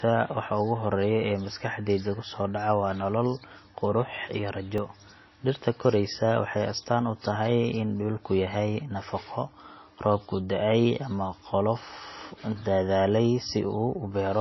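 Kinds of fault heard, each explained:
MP3 compression: nothing above 5.8 kHz and a watery swirl, likely low-bitrate MP3 near 24 kbps; the spectrogram shows a hard ceiling and flickering gaps.
Block of digital silence: after "nolol qurux iyo", a 2.7 ms tick at 4.78 s, fitting a 128-sample buffer; the waveform shows a brief near-flat run.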